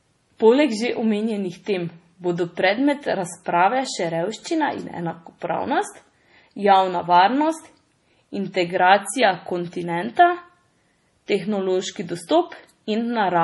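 From start to finish, the speech was most likely squeezed through MP3 compression at a very low rate, with damage consistent with roughly 32 kbps. Starved of bits, the encoder throws away weaker frequency lines, which then flicker in and out from frame to frame, and it removes everything above 11.5 kHz. The result is heavy codec damage: a watery, swirling texture, metallic chirps on s sounds, smeared consonant onsets, and a dull top end.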